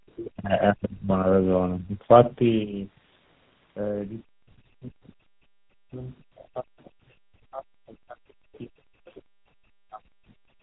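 Speech heard through tandem speech coding for the whole clip: the voice is rough, muffled and warbly, and the grain sounds like three speech coders applied one after another, most likely a G.729A, G.726 and GSM full-rate chain with G.711 links between. Each stage re-encodes the previous stage's errors, so they compound. A spectrogram would show a hard ceiling at 3.9 kHz, with smeared, blotchy harmonics and blurred formant bands below it.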